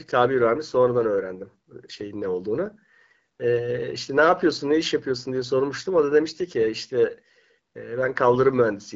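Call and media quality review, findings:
No faults found: the speech runs over an AMR wideband (HD Voice) path at a rate that fits 12.65 kbit/s, the codec working as intended with only light coding effects at that setting.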